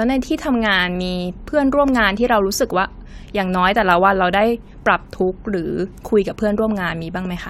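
No technical faults can be heard at any point in the speech.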